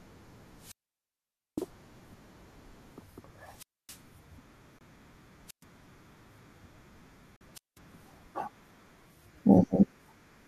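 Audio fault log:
0.56–1.72 s, 3.49–4.04 s, 5.47–5.64 s, 7.54–7.79 s, wireless microphone squelch dropout: Hiss swells, then the speech drops into near silence for about 0.86, 0.26, 0.12 and 0.19 s and returns. The FM radio link faded until the receiver's squelch cut its output.
4.79–4.83 s, 7.36–7.42 s, corrupt frame muted: The speech stops abruptly for about 40 ms and 60 ms, then resumes on time. Damaged compressed frames were rejected by the decoder and replaced with silence. The hole lengths fit a few short frames lost in a row.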